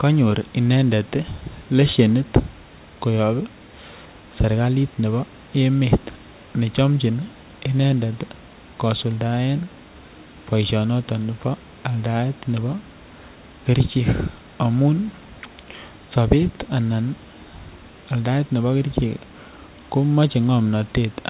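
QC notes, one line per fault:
No faults are present: the speech comes over the call path band-limited to nothing above 4 kHz, which fits G.711 mu-law at 64 kbps, with the room's background noise sitting about 30 dB below the speech.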